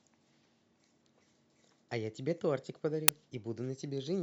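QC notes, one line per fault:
3.08 s, uninitialised buffer: a block of about 5.8 ms played before the speech was written to it, so stale memory came out as a sharp, loud digital burst.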